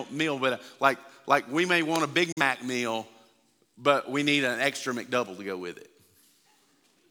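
At 2.32 s the speech mutes until 2.41 s, a digital broadcast dropout: the receiver lost or rejected a frame and silenced its output, fading down over 8 ms. The hole fits one lost frame. Unlike a buffering stall, nothing resumes late; that stretch is simply gone.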